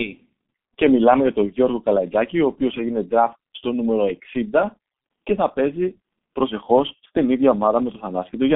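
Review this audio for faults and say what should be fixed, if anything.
The G.723.1 codec damage runs through the whole speech clip. Nothing survives above 3.8 kHz, and the band sits near 150 Hz to 3.5 kHz. Long frames and a slow voice model leave speech muffled and hoarse, with smeared consonants, which fits about 6.3 kbit/s. Carry the call on a wideband codec at a higher bitrate.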